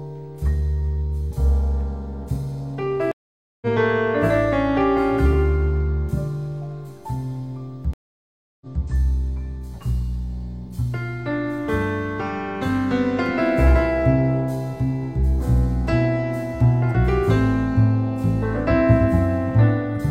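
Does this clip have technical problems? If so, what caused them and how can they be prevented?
Yes. Two stream reconnects occur. At 3.12 to 3.67 s the sound drops out for 0.5 s and resumes roughly 0.4 s later in the material, skipping content. At 7.93 to 8.84 s there is 0.68 s of silence, then playback restarts 0.23 s earlier, repeating material. Both times the connection dropped, the player went quiet, reconnected, and started a fresh decoder mid-stream. The first jumped forward as with a live stream, and the second stepped back because the server resent a burst. To prevent this, stabilise the network link and give the player enough buffering and seamless resume logic to ride out brief connection losses without restarting the decoder.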